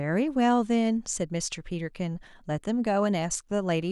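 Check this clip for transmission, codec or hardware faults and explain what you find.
No transmission, codec or hardware fault is audible anywhere in this speech recording.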